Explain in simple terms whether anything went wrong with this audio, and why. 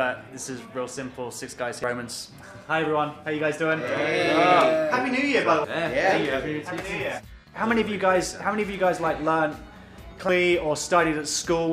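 Three brief glitches at 1.84, 5.64 and 10.29 seconds come from damaged data in a compressed stream. Bits of the stored file were wrong, so the decoder briefly misread them and the sound broke up.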